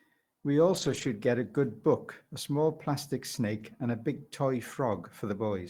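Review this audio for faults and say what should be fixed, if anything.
Lost packets rebuilt from error correction: packets went missing in transit, and the decoder filled each hole with the low-bitrate backup copy carried in the following packet, so nothing drops out. Between 0.73 and 1.07 s, about 180 ms in total is rebuilt, which points to several separate 20 ms frames. At 3.59 to 3.61 s a single 20 ms frame is rebuilt. These stretches sound briefly rougher and noisier than the surrounding speech. Reducing packet loss on the network path, for example with a more stable connection or a larger jitter buffer, would prevent this.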